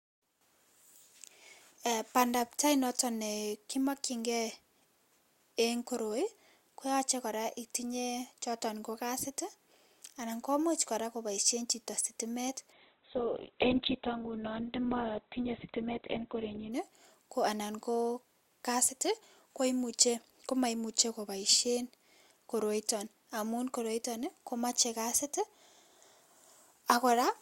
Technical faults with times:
12.72-16.72 adaptive stream at a lower bitrate

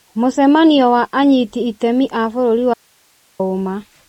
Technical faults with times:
0.00-4.08 MP3 compression
2.74-3.39 audio dropout to a faint residue

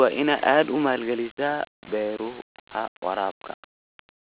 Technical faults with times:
none

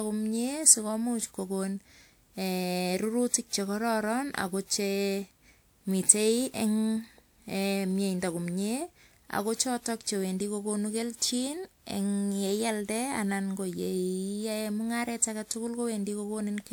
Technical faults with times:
0.00-16.73 generation loss

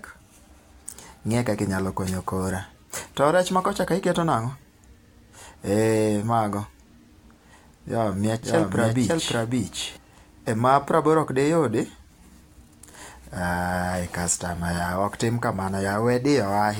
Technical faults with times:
8.43-9.97 doubled audio track

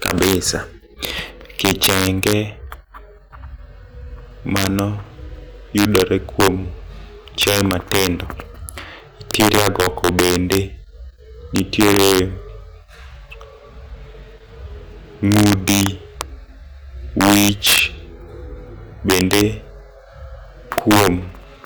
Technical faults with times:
0.00-21.66 integer overflow

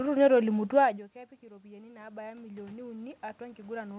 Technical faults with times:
1.48-3.99 automatic gain rising

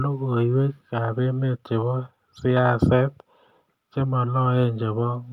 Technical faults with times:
none

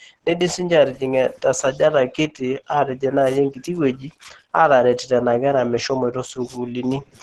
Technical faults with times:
0.00-7.23 Opus compression

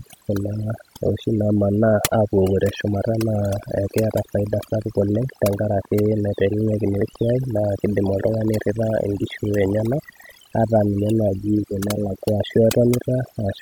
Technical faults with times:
0.00-13.61 overdone noise removal
2.74-9.94 train of clicks

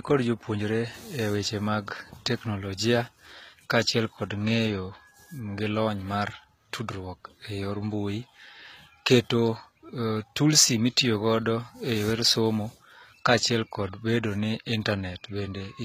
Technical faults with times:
0.00-15.84 HE-AAC compression

